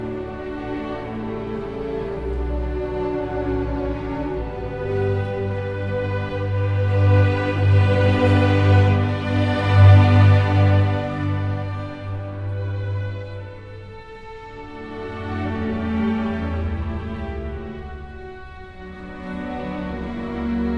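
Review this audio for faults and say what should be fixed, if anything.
No faults are present in this audio, so nothing needs to be fixed.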